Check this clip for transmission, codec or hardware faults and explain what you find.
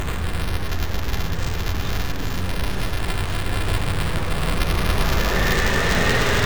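One fault is present: buffer tearing, running through the whole clip. The writing side and the reading side of the playback ring buffer have drifted out of step. They cross inside every period. A small slice of each buffer, about a twentieth, still holds audio from one lap earlier, around 10 ms old. Hard joins sit on both sides of that slice. The result is a steady robotic buzz near 345 Hz, which fits a 128-sample buffer. It is heard only while sound is playing.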